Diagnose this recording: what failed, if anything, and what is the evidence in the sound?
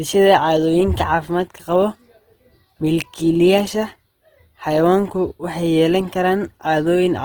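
Codec stage: the speech sounds grainy and rough all the way through, with content reaching to about 20.4 kHz. That's likely Opus compression in music mode, starved at a rate that fits roughly 16 kbps.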